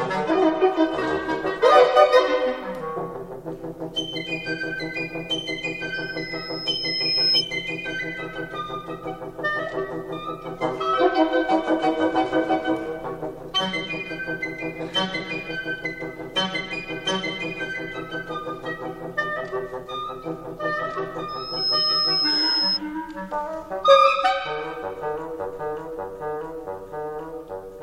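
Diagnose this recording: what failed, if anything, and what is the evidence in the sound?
Loudspeaker feedback squeal, arising in the acoustic and analogue stage where a microphone hears its own loudspeaker. A 5.2 kHz tone appears at 5.94 to 7.43 s, swelling slowly over nearly its whole length, and again at 21.28 to 22.79 s, where it climbs much faster. Both times it peaks a few dB above the programme. On a spectrogram it is a single bright horizontal line at 5.2 kHz. On the waveform the envelope bulges as it grows. Loop gain above unity at that frequency lets the tone feed itself until the loop is broken.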